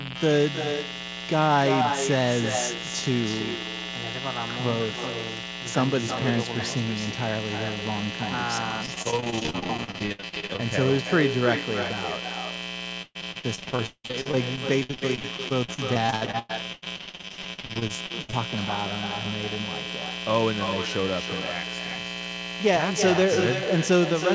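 A mains buzz runs through the whole recording: switching spikes from a 60 Hz supply have leaked into the signal path, so their harmonics stack up well into the kilohertz range. It sits around 10 dB below the speech as a steady, raspy buzz under everything.

Echo with no canceller is also present throughout. The far end's loudspeaker is feeding its microphone, and nothing strips that pickup out, so every phrase returns roughly a third of a second later, about 8 dB down, as a thinner shadow of the talker.

Repeated packet loss (robotic sound) hits from 8.86 to 10.60 s. Packets kept arriving late or not at all, and each hole was patched by stretching the last sound. About 37% of that span is concealment, with gaps up to 64 ms, so the speech turns choppy.

The same repeated packet loss returns, heavier, from 13.02 to 18.35 s. Roughly 35% of the stretch is filled in, and one gap lasts 176 ms. 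The speech sounds robotic and broken, its band topping out near 8 kHz from the call codec.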